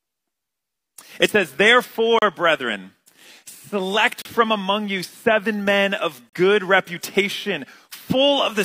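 The audio drops out three times with a short, hard-edged hole of silence, at 2.19–2.22 s, 4.22–4.25 s and 6.30–6.33 s, each about 35 ms long and spaced roughly 2 s apart. That's a gap between stream segments: the timestamps on consecutive 2-second chunks don't quite meet, so the player pads the difference with silence. Nothing is actually cut out. The timeline just gets stretched a little at each boundary.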